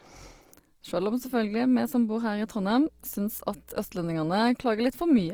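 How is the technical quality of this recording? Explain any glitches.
The recording has audible technical flaws: codec damage throughout, plus a brief hum in the middle.

Opus compression: across the whole clip the speech sounds grainy and rough, with noisy texture where tones should be clean. This is likely from Opus in its music mode, which fills starved bands with folded or noise content rather than leaving gaps. The grit fits a low bitrate around 24 kbps, though the full bandwidth up to about 20.4 kHz is kept.

Mains hum: from 2.84 to 4.34 s a steady low 60 Hz tone sits well beneath the speech. The power line is leaking into the signal, most often through a ground loop or a nearby transformer.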